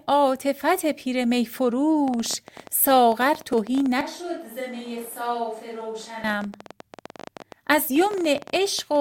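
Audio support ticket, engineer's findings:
Train of clicks, 2.08 to 8.97 s. Around a hundred near-identical pulses, 14.2 per second, uneven spacing, peaking roughly 5 dB over the speech and audible in pauses too. Likely interference or a faulty connection. Unlike crackle, each click has the same shape.

Switch to a distant microphone, 4.01 to 6.24 s. Abrupt change to a roomy, hollow, bass-light sound, roughly 10 dB quieter, room noise around 35 dB below speech. Likely close-mic failure with fallback to a far source. Not a gain drop: the tone and room change too, and snap back.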